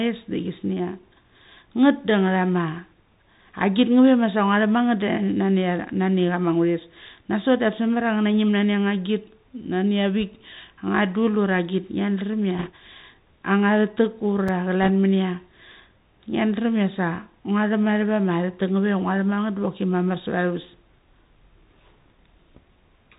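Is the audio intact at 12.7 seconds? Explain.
No. From 12.59 to 12.70 s there are bit errors on a Bluetooth voice link, with around 2 percent of bits flipped. Each CVSD bit only nudges the level by one small step, and the decoder soon recovers, so the damage is a brief rushing, crackly noise rather than loud clicks or dropouts like a lost packet.

Underneath, the Bluetooth CVSD headset codec runs the whole time at 64 kbps. Its one-bit up-or-down coding with an adapting step leaves nothing above 4 kHz and lays a granular hiss under the speech. Unlike the short burst, this muffled, scratchy sound is steady throughout.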